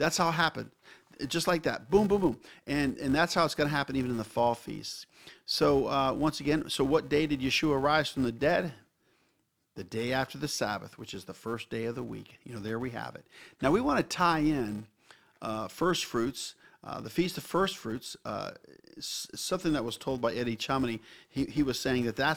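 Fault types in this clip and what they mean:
Filter restarted on every block: The filter loses its memory at each block boundary and starts again from silence. Each block opens with a tiny transient. This gives a steady buzz near 345 Hz, which fits a 128-sample block. It gets louder and quieter with the speech.
Underrun with held sample: The output briefly ran dry and the converter held its last value. At 13.89 s, between "have it now we" and "to tie in uh", the waveform freezes for about 0.34 ms. Essentially nothing is lost.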